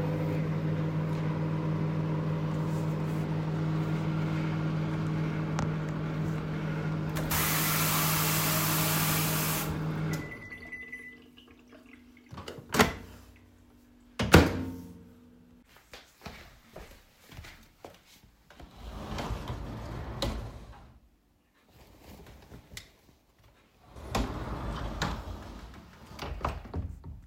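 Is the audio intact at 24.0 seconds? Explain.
No. At 23.96 s a sudden jump skips about a tenth of a second of sound, likely a dropped buffer (overrun) that joined the two sides directly.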